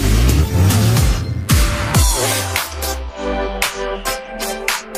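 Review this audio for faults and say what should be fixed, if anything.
A steady, raspy mains buzz runs from 0.0 to 1.5 s, roughly 30 dB under the sound: switching spikes twice per 50 Hz cycle, spraying harmonics into the kilohertz range. Prevent it by keeping dimmers and rectifying supplies off the recording circuit and using shielded, properly grounded cabling.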